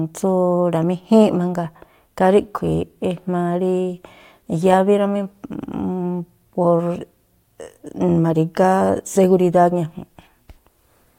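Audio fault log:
Listening to the speech closely, nothing stood out as a fault.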